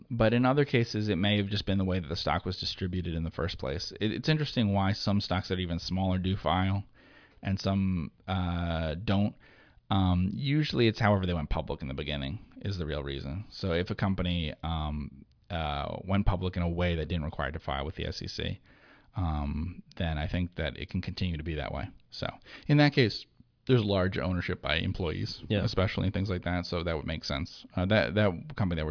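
No technical faults can be heard anywhere in this speech recording.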